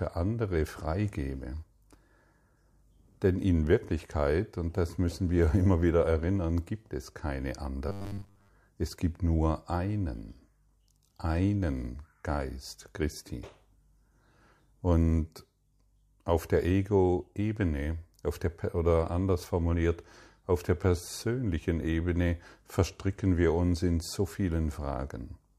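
Right after "erinnern gibt es keine", from 7.89 to 8.50 s, the speech goes robotic with a rigid 100 Hz buzz, likely from repeated short buffers. About 10 ms chunks get looped while real audio is skipped for roughly 70 percent of that stretch.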